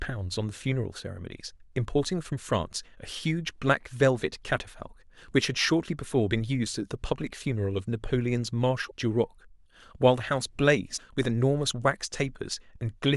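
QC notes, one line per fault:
8.84–8.91 s and 10.93–11.00 s, damaged data in a compressed stream: in both places, roughly 70 ms of the encoded speech stream arrived corrupted, so the decoder could not read those frames correctly and lost its place until it locked onto a valid frame header again. Each time the result is a brief chirp, squawk, click or short hole that breaks into the speech, caused by the decoder producing garbage or dropping output until it resynchronises.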